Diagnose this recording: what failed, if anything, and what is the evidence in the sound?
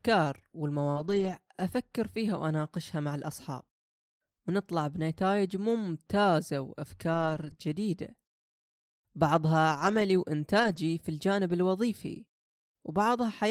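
The network stage dropped audio that arrived too late for the decoder, causing short concealed packet loss. At 0.91 to 0.98 s about 40 ms is missing, and at 7.54 to 7.58 s about 20 ms. In each case the receiver extended the preceding sound, continuing its pitch where voiced or shaping noise where not, then crossfaded back into real audio. Each gap is heard as a brief smear or wobble in the speech.

The network also caused repeated losses where packets were lost but rebuilt from error correction. Copies carried in the following packets replaced them, so nothing goes silent, but those stretches sound rougher and noisier than the surrounding speech. This happens across 0.96 to 1.38 s (about 220 ms rebuilt), 7.14 to 7.52 s (about 200 ms), 9.72 to 10.02 s (about 160 ms), 10.60 to 10.78 s (about 100 ms), and 11.50 to 11.52 s, a single 20 ms frame. Each rebuilt frame came from a low-bitrate backup copy rather than the full-quality original.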